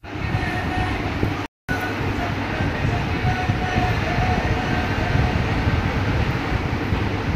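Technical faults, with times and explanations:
1.46–1.69 s, playback stall: the sound cuts out abruptly mid-flow and the output stays completely silent for about 0.23 s before audio returns. The gap reads as an interruption of output rather than a quiet passage in the material. The likely cause is the player running short of buffered data or its audio thread being blocked, leaving nothing to send to the output until it recovered.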